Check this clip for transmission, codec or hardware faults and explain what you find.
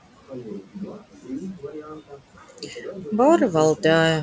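One genuine fault, and it comes from processing rather than the link. Between 0.28 and 3.12 s there's speech cut by the noise suppressor. It treats quieter speech as background and pulls it down by up to about 16 dB, leaving roughly a second and a half faint or swallowed.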